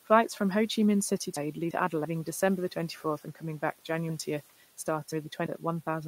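Chunks out of order at 1.37 to 2.05 s and again at 4.10 to 5.46 s: the speech is cut into blocks of about 341 ms, and one block arrives late and plays after the ones meant to follow it. In the first spot it trails by a single block; in the second it lands three blocks late. Nothing is missing, but each spot jumbles briefly, audible above room noise about 25 dB below the speech.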